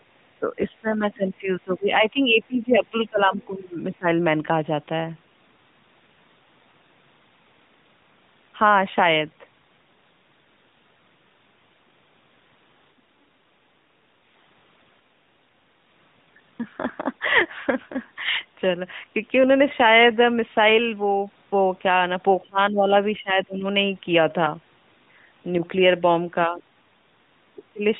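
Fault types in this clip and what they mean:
Speech suppressed in double talk: the speech sinks by roughly 15 to 25 dB in stretches near the start and end, likely an echo canceller turning the talker down while the far side spoke. Unlike packet loss, the talker is turned down by the canceller rather than lost in transmission.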